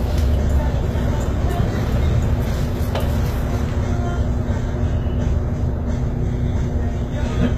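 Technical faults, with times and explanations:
Throughout, HE-AAC compression: the treble is likely rebuilt from copied lower bands, so it sounds gritty and mismatched, with nothing above 14.9 kHz, which fits roughly 20 kbps.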